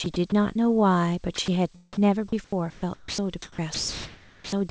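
From 0.04 to 0.32 s, 1.36 to 1.48 s and 1.99 to 4.52 s, the speech is chopped, likely by the voice detector, and swapped for synthetic comfort noise. Gaps run about 60 ms, 40 ms, then 1.4 s.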